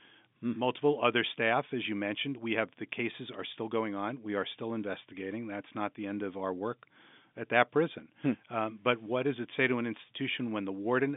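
No technical faults are audible.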